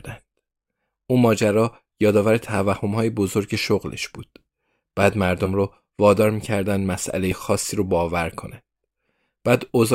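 At 2.76 to 2.79 s, 5.45 to 5.48 s and 7.31 to 7.35 s the speech jumps forward, losing roughly 30, 30 and 40 ms. These are compressed frames skipped: whole frames were missing or rejected by the decoder, which fits a 10 ms frame size. Unlike a dropout, no silent gap appears.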